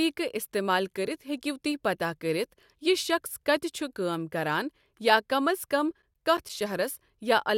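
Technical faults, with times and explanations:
5.79 to 6.72 s, CD scratch ticks: a run of nine short, evenly spaced ticks sits over the speech, roughly eight or nine per second, each a tiny click or gap lasting no more than about 10 ms. The regular spacing comes from a scratch or blemish on the disc passing the laser once per revolution. Each pass ruins more data than error correction can rebuild, so the player interpolates or mutes those samples.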